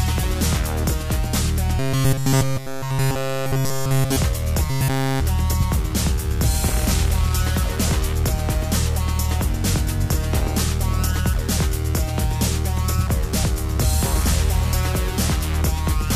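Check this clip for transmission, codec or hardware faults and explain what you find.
Robotic sound from repeated short buffers occurs from 1.79 to 4.16 s and again from 4.70 to 5.21 s: a rigid, metallic buzz near 134 Hz replaces essentially all the audio. A chunk of about 7.5 ms is likely being replayed over and over while fresh audio fails to arrive.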